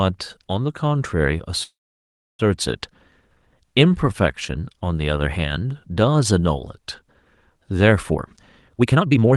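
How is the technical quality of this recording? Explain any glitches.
Two glitches are audible in this speech, which has the limited top end, near 12 kHz, of a call codec such as Opus.

Call audio freeze, 1.63 to 2.41 s: packets were likely delayed, so the jitter buffer emptied. A brief fading fill leads into about 0.67 s of silence, then speech resumes where it stopped, with nothing lost.

Jitter buffer speed-up, 8.10 to 9.36 s: to shed excess buffered delay, the receiver cut roughly 0.7 s in short pitch-period slices. Speech runs at 146% speed without any pitch change and sounds hurried.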